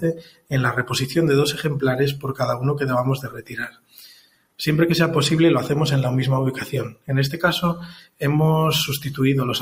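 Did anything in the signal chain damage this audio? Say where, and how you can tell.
Yes. A speech-tuned noise suppressor was left on in the call processing, running on non-speech sound. It treats steady content as noise, so the level pumps by roughly 15 dB throughout.

You can hear sound cut by the noise suppressor at 0 to 0.53 s, 3.17 to 4.59 s, 6.91 to 7.1 s and 7.75 to 8.23 s. Sustained parts sink by about 20 dB while attacks come through.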